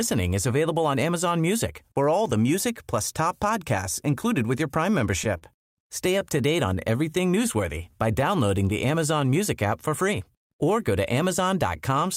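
At 5.37 to 5.44 s there is a short stall from a late packet. A packet arrived late and the jitter buffer emptied. The receiver held the last sound for 37 ms, then resumed where it left off. Nothing is lost. One sound simply drags.

From 6.07 to 6.74 s come scattered short gaps. About four packets straggled in late across this stretch. Each hole was patched by extending the previous sound, roughly 10 ms at most. Only a small fraction of the span is patched. Brief ticks or hiccups result.

Overlapping that, from 6.53 to 9.90 s, is a jitter buffer slow-down. The buffer was running low or had raised its target delay, so it was rebuilding its reserve. It repeated tiny slices of the waveform, adding 145 ms. The speech runs at 96% speed, pitch unchanged, just before "free or go to".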